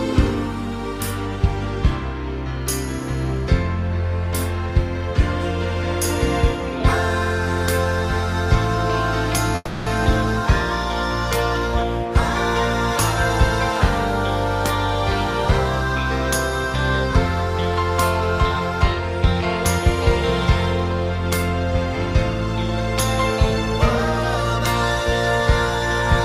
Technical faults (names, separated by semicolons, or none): call audio freeze